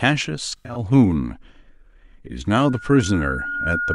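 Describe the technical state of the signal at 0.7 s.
At 0.7 s you're in the middle of an AAC frame loss with concealment that runs from about 0.49 to 0.79 s. Roughly 150 ms of audio went missing, spread over about a quarter second, which points to around seven lost frames, with the longest gap near a tenth of a second. The decoder patches those holes by reusing the last good spectrum with jumbled phase, so the speech turns smeared and noisy and phasey there.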